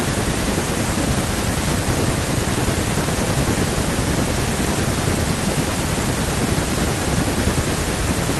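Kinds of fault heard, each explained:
No faults can be heard in this speech clip. There are no dropouts, clicks, distortion or other disturbances anywhere in it.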